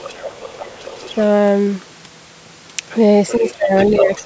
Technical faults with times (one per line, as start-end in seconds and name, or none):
0.00-1.17 other side's voice leaking through
3.28-4.26 other side's voice leaking through
3.37-4.26 speech suppressed in double talk